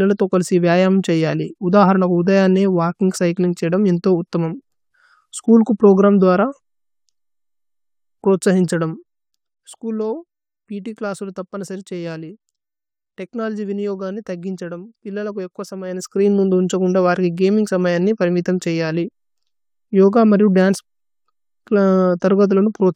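Speech with zipper noise twice: from 8.57 to 9.99 s, as the level falls by roughly 10 dB, and from 15.79 to 16.30 s, between "ഛദമ് പില്ല ലു ഏക്വ" and "മോ ധുന്ഛകുന് ദ വരി", as it rises about 10 dB in 1 dB steps. The gain jumps around 40 times a second without smoothing, and each jump clicks, so a ticking rides on the sound. A clean fader move glides with no such texture.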